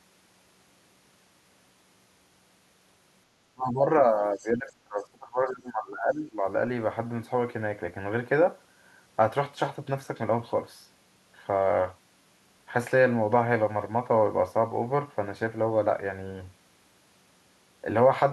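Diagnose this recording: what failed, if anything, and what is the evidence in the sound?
The failure is in call processing, at the echo canceller. This is speech suppressed in double talk. The talker's level dips from 3.54 to 3.86 s, then again from 4.07 to 6.45 s. The deepest drops are around 20 dB. About 2.3 seconds in all are affected. The likely cause is that both sides spoke at once. The canceller could not tell local speech from loudspeaker echo, so it turned everything down.

The same stage shows the other side's voice leaking through. A brief scrap of a second voice appears from 4.37 to 4.49 s. It sits roughly 30 dB below the main speech. It is faint and short, inside the suppressed stretch. This is likely residual echo. The far end was playing on the talker's loudspeaker, and the microphone picked it up. The canceller removed most of it, but not all.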